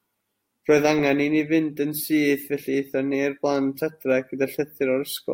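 No technical faults can be heard anywhere in the recording. Nothing in the audio stands out as a problem at any point.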